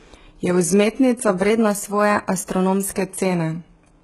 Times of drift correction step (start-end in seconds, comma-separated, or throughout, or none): 1.50-2.94